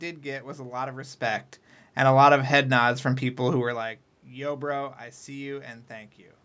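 Nothing in this speech stood out as a fault on listening.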